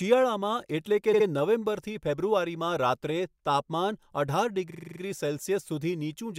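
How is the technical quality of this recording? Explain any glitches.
Two stutters from repeated frames stand out in the speech. At 1.13 to 1.26 s, a 64 ms stretch plays twice more, adding 128 ms. At 4.69 to 4.99 s, a 43 ms chunk loops seven extra times, adding about 0.3 s. A run of compressed frames got written or sent more than once, so the decoder replays it. You hear a brief machine-gun stutter.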